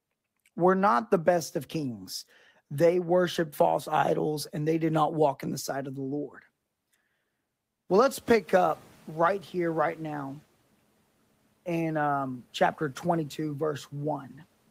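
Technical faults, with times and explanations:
7.89–10.40 s, noise suppressor catching up: Around 8 s the room noise jumps by about 17 dB. The suppressor's noise estimate is still set to the quieter level, so the new noise passes through with less reduction at first. Over about 2.5 s the estimate adapts and the noise sinks by about 7 dB. This is heard as background noise that swells, then slowly fades back. Even at its peak the room noise stays about 31 dB below the speech.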